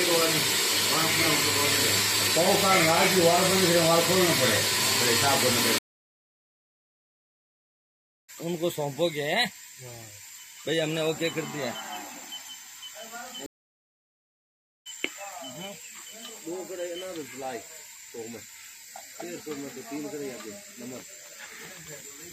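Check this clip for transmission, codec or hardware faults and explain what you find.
Two stream reconnects. From 5.78 to 8.30 s the sound drops for 2.5 s, then resumes about two seconds further on. Again at 13.46 to 14.87 s, about 1.4 s of silence, picking up roughly a second and a half later. Each time the link broke, the player went quiet, reconnected and started a new decoder mid-stream, so whatever played during the gap is simply skipped.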